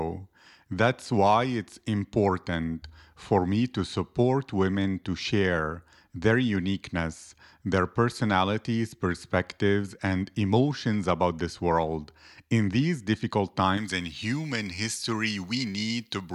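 From about 13.78 s, right after "these difficult", to the end at 16.35 s, the speech turns thin, bright and hissy, with sibilants standing out sharply. This is pre-emphasis left on: the treble was lifted for recording or transmission, here following the J.17 curve, but the matching de-emphasis was never applied. High frequencies therefore sit about 11 dB too strong at 10 kHz relative to 1 kHz.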